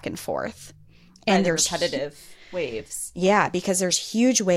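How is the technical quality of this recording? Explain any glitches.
No glitches or faults are audible.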